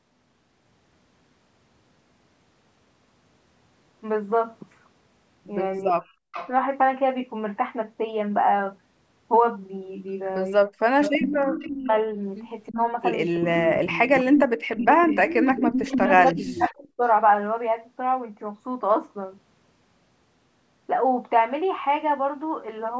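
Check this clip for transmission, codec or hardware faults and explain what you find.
Two faults recur in this speech clip, both pointing to echo cancellation on a call struggling while both sides talk at once.

Speech suppressed in double talk appears at 5.81–6.25, 10.66–11.91, 12.69–12.79, 13.39–14.86 and 15.46–17.04 s. The voice dips by up to about 40 dB or drops out in pieces, likely because the canceller mistook it for loudspeaker echo. The waveform shows sudden collapsed envelopes, and the spectrogram shows band-limited (below 8 kHz) energy vanishing in blocks.

An echo leak follows at 5.87–6.5, 11.01–11.93 and 12.69–16.7 s. It is a fainter copy of the voice, about 10 to 15 dB down, trailing by 327 ms, likely residual loudspeaker pickup the canceller failed to remove. On a spectrogram it appears as ghosted, offset repeats of the harmonic patterns.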